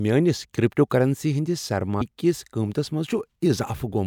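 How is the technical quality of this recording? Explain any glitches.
One glitch stands out, at 2.00 s. It falls between "کریپٹوکرنسی ہندِس" and "كِس قۭمتس". Compressed frames are skipped there. About five whole frames never play, roughly 150 ms of speech. The jump fits a frame length of about 26 ms. Neighbouring frames overlap, so the join is a brief smeared blip rather than a sharp click.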